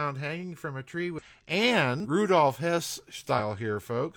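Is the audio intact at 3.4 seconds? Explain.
No. From 3.35 to 3.40 s the speech breaks with a short glitch lasting about 50 ms. This is damaged data in a compressed stream: bytes in that stretch of the encoded file were lost, zeroed or overwritten, so the decoder misreads or rejects the affected frames, loses its place, and has to hunt for the next valid frame header before clean audio resumes. The misread frames and that search are what is heard as the glitch.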